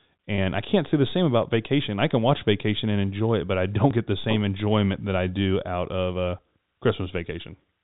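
Speech over G.711 telephone coding, with its band ending at 4 kHz. From 0.36 to 0.38 s, just before "I can't say the", packet loss with pitch repetition bridges a 20 ms gap (one lost packet) with a slightly buzzy held sound, seen as identical repeated cycles in the waveform. At 3.91 s, between "it but I don't" and "get the same enjoyment", about 20 ms of audio is missing between chunks, likely from 2.5 s chunking, leaving a butt-joined skip.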